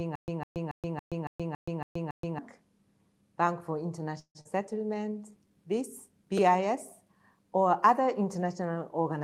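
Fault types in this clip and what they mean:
Stutter with silent gaps: The clip opens with this already under way, and it lasts until 2.39 s. A burst of about 154 ms plays, then about 125 ms of dead digital silence follows. The cycle repeats every 279 ms, eight times over, at a steady pace. The likely cause is a player or stream that stalled and replayed its last fragment on each retry before running dry. The audio due in those gaps never plays.
Long network dropout: From 4.19 s to 4.47 s the sound breaks off. The last sound is first stretched into a fading buzz or hiss for about 255 ms, and then there are about 70 ms of silence. When audio resumes, roughly 160 ms of material is simply gone. This is likely a stretch where no packets arrived, so the receiver concealed the hole, gave up, and then jumped ahead, shifting its delay by about 40 ms.
Jitter buffer slow-down: Between 4.87 s and 5.80 s the audio plays at about 91% speed, and the pitch stays put. 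Sounds feel drawn out. The receiver's reserve ran low, or its target delay had just been raised. To rebuild it, it repeated single pitch periods and small pieces of pauses again and again. This added about 91 ms in total, which is heard as a sluggish drag.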